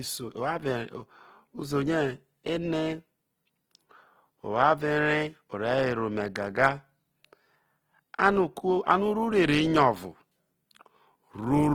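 Speech, with plainly audible Opus compression damage for the entire clip: the sound is grainy and rough, with harmonic detail smeared into a hiss-like texture rather than swirling, most likely from Opus running in its CELT music mode at a low rate that fits about 16 kbps. On a spectrogram the bands stay filled up to about 20.3 kHz with few holes, but the harmonic lines look blurred and speckled with noise.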